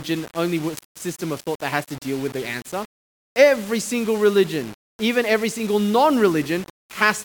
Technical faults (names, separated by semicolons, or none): low bit depth without dither; electrical switching spike